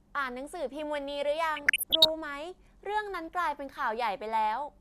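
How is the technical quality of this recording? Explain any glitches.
There's one glitch in this speech clip, DAB burbling from about 1.56 to 2.09 s. Weak reception let bit errors slip past error correction into the MP2 data, so corrupted samples put short blips of noise in single sub-bands and corrupted scale factors make sub-bands jump in level for up to a frame, giving a burbling over the speech.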